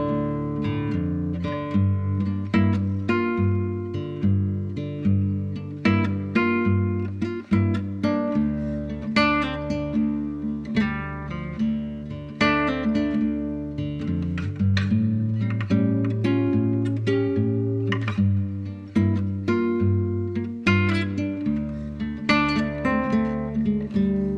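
No technical faults can be heard anywhere in the recording. Nothing in it points to a problem in how the audio was captured, carried or played back.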